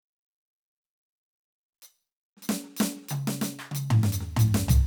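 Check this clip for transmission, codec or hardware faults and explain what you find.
No faults can be heard anywhere in this music.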